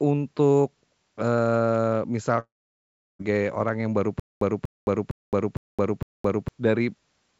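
At 2.40 s there's a long network dropout, likely from a connection stall. About 0.8 s of the speech never arrives, so the receiver stretches the last sound into a short fading buzz, then it's roughly 0.7 s of silence until things resume at 3.22 s, with that stretch gone.

From 4.20 to 6.48 s you get a stutter with silent gaps, likely the stream stalling and retrying. A 0.24 s fragment replays five times, each followed by about 0.22 s of dead digital silence, so it pulses every 0.46 s. The real audio for that span is lost. Nothing reaches above 8 kHz, which fits a G.722 call path.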